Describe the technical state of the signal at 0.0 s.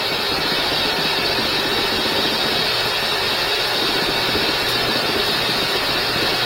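At 0.0 s the audio is intact, with no dropout, distortion or other fault present at that moment.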